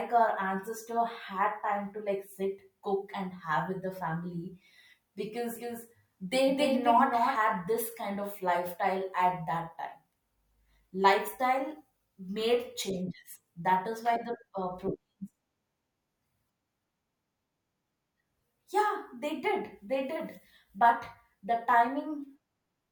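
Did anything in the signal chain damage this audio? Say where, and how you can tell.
Yes. Likely an edit or a slower second capture path doubled the audio track from 5.56 to 7.36 s. A quieter, dry copy trails about a third of a second behind, stopping abruptly before "this kind of lifestyle".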